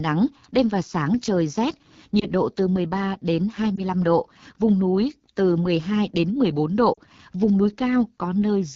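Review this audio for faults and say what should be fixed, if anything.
The speech runs through the AMR wideband (HD Voice) codec throughout, and the damage is plainly audible. It sounds rough and raspy, which points to one of its lowest modes, around 8.85 kbit/s. Too few bits remain to model the pulses and vocal tract cleanly. Using 12.65 kbit/s or higher would prevent this.

Lost AMR speech frames cause brief warbling dips at 2.20 to 2.26 s and 3.76 to 3.81 s, each fitting one lost 20 ms frame. At 6.94 to 6.99 s the sound drops to near silence, which fits about 40 ms lost. The decoder repeats its last good settings at falling gain. Better radio coverage or stronger error protection would prevent this.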